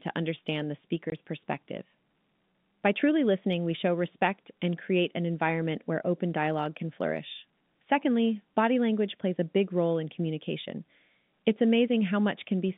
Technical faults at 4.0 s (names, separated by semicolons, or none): none